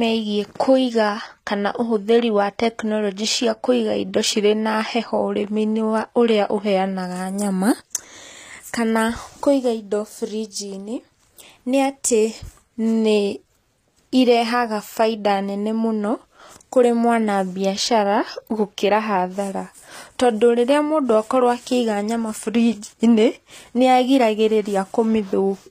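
All the way through, the speech has that HE-AAC compression sound: the top end is bright but synthetic, with gritty, lispy s sounds where rebuilt treble doesn't match the real harmonics. It likely comes from a low-bitrate encode around 24 kbps, and nothing survives above about 14.9 kHz.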